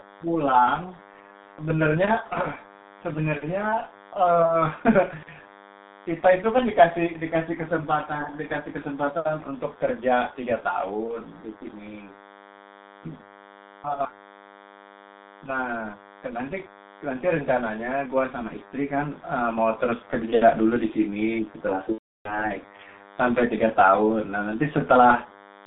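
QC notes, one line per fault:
throughout: DECT cordless phone buzz. A thin, steady 100 Hz buzz with dense harmonics sits about 25 dB below the speech, from a nearby handset's radio bursts being rectified in the audio circuit.
throughout: G.723.1 codec. Audio is confined to roughly 200 Hz to 3.7 kHz, sounding muffled and hoarse with smeared consonants. The heavy coding damage fits a low-rate 6 kbit/s-class mode.
21.92–22.48 s: VoIP packet loss concealed by the speech codec. About 330 ms of speech is lost; the decoder briefly extrapolates its last frame at falling gain, then mutes from the third lost frame on. The gap fits eleven lost 30 ms frames.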